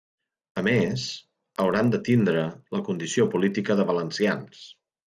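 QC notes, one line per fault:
Throughout: resampler restarted on every block. The 48 kHz to 24 kHz conversion treats each 40 ms block in isolation, so the filter sees no true neighbouring samples at block edges and leaves a small discontinuity at each seam. These land every 40 ms, a steady 25 Hz tick rate under the speech, appearing only while signal is present and dropping out in the gaps.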